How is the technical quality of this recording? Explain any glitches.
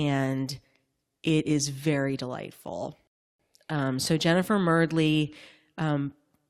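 One glitch affects this speech recording. At 3.07 s, after "it is very delightful", a rebuffering stall cuts to silence for 0.32 s. Playback ran dry, then resumed exactly there, adding time without losing audio.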